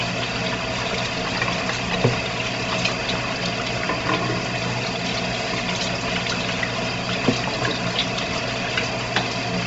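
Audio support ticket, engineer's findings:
Bluetooth LC3 compression, throughout. Band stops near 7.8 kHz; upper spectrum grainy, noise-filled, with a breathy edge. Likely LC3 link coding: heavy damage fitting a 24 kbps stream in 7.5 ms frames, upper bins zeroed and noise-substituted.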